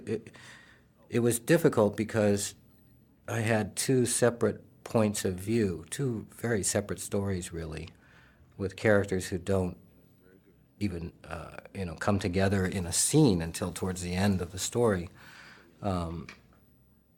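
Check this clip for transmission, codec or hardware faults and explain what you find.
No faults turn up anywhere in the recording.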